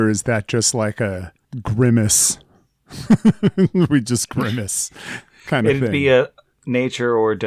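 A short recording of speech, with nothing technically wrong to be heard in it. No fault stands out at any point across its length.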